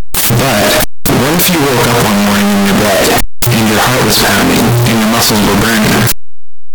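Throughout the speech, harsh, very loud distortion is heard. Quiet moments blast as loud as the rest. Signed and unsigned 16-bit samples were likely mixed up.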